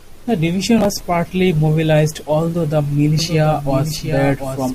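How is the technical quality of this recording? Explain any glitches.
The recording has two clear glitches. From 0.76 to 1.02 s there's processor overload crackle: the system kept missing its buffer deadlines, skipping short chunks of roughly 10 ms each, so the speech tears into a gritty burst. From 3.19 s to the end there's a doubled audio track, likely a second, slower capture path, with a copy about 5 dB quieter trailing roughly 0.7 s behind and cutting in abruptly.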